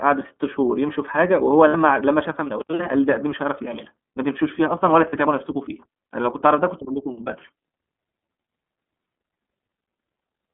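Throughout, the iLBC codec limits the speech to about 200 Hz to 3.5 kHz and gives it a rough, synthetic grain, which fits its 30 ms frame mode. At 1.68 s (60 ms), 5.09 s and 9.02 s (30 ms each), lost iLBC frames are concealed by repeating the last pitch cycle mixed with noise. Each gap sounds like a briefly held, buzzy vowel. The voice returns almost at once, with no lingering smear afterwards.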